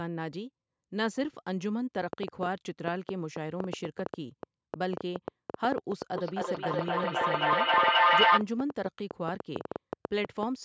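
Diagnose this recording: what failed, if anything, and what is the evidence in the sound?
A train of clicks runs from 2.13 to 10.44 s, about 7 per second at uneven spacing, peaking roughly 15 dB above the signal. It is likely interference in the analogue wiring or interface. On a spectrogram these show as thin vertical broadband lines.

Feedback echo between two devices appears from 6.16 to 8.46 s. The sound repeats every 300 ms or so and builds to about 9 dB above the speech. On a waveform this looks like stacked, repeated envelopes.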